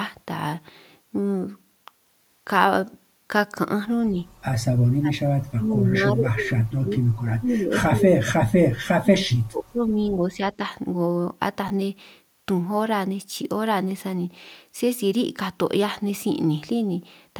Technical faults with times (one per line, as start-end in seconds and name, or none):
4.96-8.42 speech suppressed in double talk
8.86-10.64 speech suppressed in double talk
11.68 chunks out of order